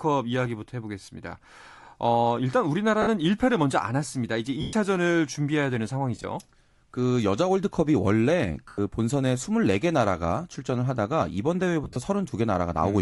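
Throughout the speech there is plainly audible codec damage: the upper spectrum sounds thinned and replaced by a grainy, breathy wash. This is likely Bluetooth LC3 compression, the LE Audio transform codec zeroing high-frequency bins and filling them with noise at a modest bitrate. The texture fits a rate around 48 kbps with 10 ms frames.

Lost LE Audio frames interrupt the audio six times. At 1.05 s a 30 ms gap is concealed by a brief noisy smear. At 3.02 s the same happens for 50 ms. At 4.61 s a longer 120 ms loss starts as a smeared repeat of the preceding spectrum and then fades toward silence as the concealment decays. At 6.16 s losses are scattered over 80 ms, totalling 50 ms in short runs of about 20 ms at most. At 8.68 s a 100 ms loss again smears and fades. At 11.84 s 80 ms of loss is spread over 120 ms, with runs of roughly 30 ms. In each case the decoder reuses the last good spectrum with randomised signs, turning voiced sound into hiss-like blur.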